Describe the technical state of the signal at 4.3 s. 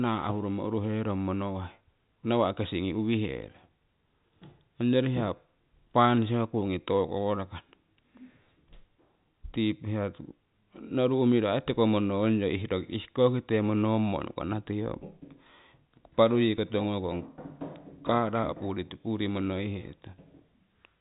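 At 4.3 s the audio is intact, with no fault present; the G.711 telephone coding carrying the clip simply leaves nothing above 3.8 kHz there.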